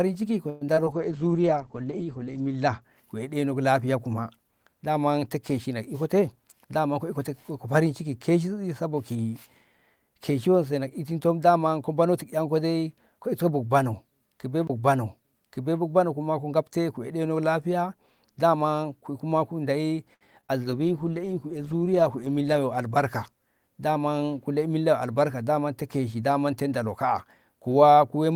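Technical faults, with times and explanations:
0.49–0.98 s, repeated packet loss (robotic sound): The speech turns choppy and mechanical, with small pieces gone. Four separate holes opened in under half a second, the longest 116 ms. Each was bridged by extending the preceding sound, for 158 ms of patching in total, about 40% of the span. Another 60 ms simply disappeared.
0.92–2.88 s, call bitrate drop: Starting just before the robotic stretch ends, the speech goes dull and muffled, with a rough, watery texture. The encoder's rate fell from 32 kbps to 11 kbps and stayed at the bottom for about 1.6 s. At that rate it coded the sound coarsely and narrowed the audio band from 20 kHz to 8 kHz, removing the upper sibilance and air until the rate climbed back.
5.94–7.19 s, jitter buffer speed-up: The speech runs about 7% fast at its normal pitch and sounds slightly hurried. The receiver had built up more buffered audio than it aims to hold. 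It worked that excess off by cutting out many short, pitch-period-sized slices, roughly a tenth of a second in total. Pitch is untouched because whole cycles are removed rather than the sound being resampled.
14.67–14.70 s, CD skip: A brief tick and a near-silent break of about 20 ms, after which the speech continues from a different place rather than from where it stopped. The laser lost its track and landed on another turn of the disc's spiral. The player muted during the jump, so the cut reads as a small click followed by a jolt in continuity.
20.14–20.23 s, short stall from a late packet: A sound is held unnaturally long with a faint buzzy drone, then the speech resumes from where it paused, with nothing missing. A packet arrived late and the buffer ran dry, so the receiver stretched the last sound by 65 ms while it waited. This adds 65 ms of delay.
20.41–20.45 s and 20.47–20.51 s, short concealed packet loss: Two quick smears or wobbles a few hundredths of a second apart, where a short consonant-like sound can go missing. 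Each hole was filled from the preceding sound, 18 ms and then 21 ms, and blended back into real audio. Underneath, 20 ms and then 40 ms of the original were lost. The second event also trimmed about 20 ms from the playout delay.
20.63–24.14 s, call bitrate drop: The speech again turns coarse, rough and somewhat watery as the rate fell from 32 kbps to 13 kbps. It stayed at that floor for about 1.7 s, so the encoder had far fewer bits to describe each frame until the bandwidth estimate recovered.
22.22–22.54 s, jitter buffer speed-up: Inside that low-rate stretch, the speech briefly rushes about 13% fast at unchanged pitch. The receiver removed roughly 50 ms of excess buffered audio in short pitch-period pieces, so the acceleration is faster than the earlier one.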